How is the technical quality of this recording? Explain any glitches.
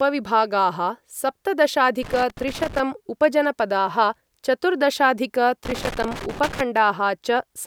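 The speech is marred by two irregular bursts of crackling and scratching, from 2.03 to 2.80 s and from 5.65 to 6.61 s. This is loose connector crackle: a worn or dirty contact rapidly breaking and remaking, chopping the signal.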